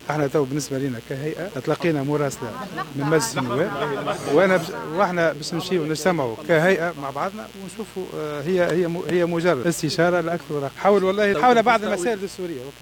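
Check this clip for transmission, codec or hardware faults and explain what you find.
One hardware fault is present: mains buzz, running for the whole clip. Sharp switching spikes from a dimmer, rectifier or unshielded cable enter twice per 60 Hz cycle, spraying harmonics into the kilohertz range. The result is a steady, raspy buzz sitting roughly 25 dB below the signal.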